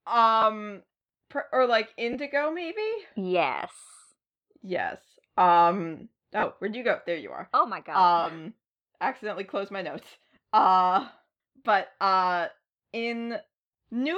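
Speech clip with five short Bluetooth LE Audio frame losses, at 0.42 s, 2.13–2.15 s, 6.40–6.43 s, 8.23–8.27 s and 10.35–10.37 s, each 10 to 30 ms. The LC3 decoder filled each gap by reusing its last spectrum with scrambled phase, so you hear brief noisy smears. The light codec compression underneath is faint.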